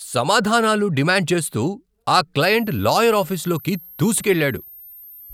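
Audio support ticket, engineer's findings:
Switching supply whistle from 2.41 s to end, after "సమాధానాలు డిమాండ్ చేస్తూ ఆ": high whine drifting 12.7–13.2 kHz, roughly 25 dB under speech. The wandering pitch rules out a fixed pilot tone. PSU burst mode.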